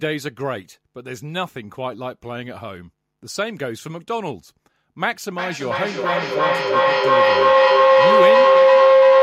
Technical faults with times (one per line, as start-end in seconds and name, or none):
5.38-9.23 feedback howl